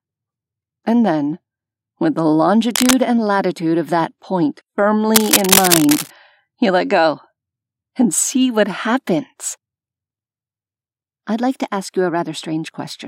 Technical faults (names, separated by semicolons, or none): cable scratch noise